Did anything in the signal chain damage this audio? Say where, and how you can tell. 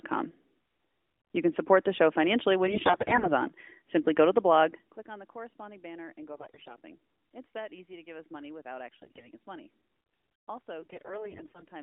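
Yes. The damage happened on the radio link, as AMR bit errors in the mobile codec stream. There are four bursts: 2.68–3.32 s after "the show financially when", 6.32–6.76 s after "corresponding banner and go", 8.92–9.29 s after "give us money without" and before "us money", and 10.82–11.64 s. In each burst the speech keeps its rough pitch and level but turns hoarse and gargly. The cause is a heavy error rate in the weakly protected bits. These errors scatter the excitation pulses and skew the fine gain and spectral parameters, and the checksum on the core bits never trips. On a spectrogram the harmonics inside the 300–3600 Hz line band smear into grainy noise for each burst. On the waveform the envelope stays intact but looks ragged within it.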